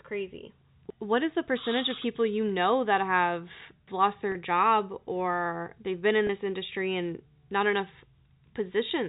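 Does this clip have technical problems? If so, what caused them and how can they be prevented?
Yes. Packet loss with pitch repetition: the receiver lost brief runs of packets and bridged each gap by repeating the last pitch period. At 4.32–4.35 s, between "know that have lost" and "job or they've been," a 30 ms gap becomes a briefly held, buzzy tone. At 6.27–6.29 s, after "or they've been in" and before "this industry and not," a 20 ms gap does the same. To prevent it, use a larger, adaptive jitter buffer and forward error correction on the network path.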